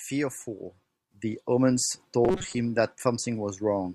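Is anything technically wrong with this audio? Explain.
Yes, there are two faults in this speech clip.

At 1.11 s a sudden gain jump raises the level by about 6 dB and it stays raised to the end. The speech and the background noise step up together, likely from a gain setting applied instantly rather than ramped. The waveform envelope shows an abrupt step, and the spectrogram's noise floor brightens at the same moment.

From 2.25 to 2.55 s the speech turns into a rigid, metallic buzz at 188 Hz. This is robotic sound from repeated short buffers, likely from audio arriving too slowly and the last fragment being replayed to fill the gap. The 188 Hz period fits a repeat of roughly 5.3 ms, and about half the real audio is skipped. The spectrogram shows evenly spaced horizontal lines at multiples of 188 Hz, and the waveform shows short identical cycles.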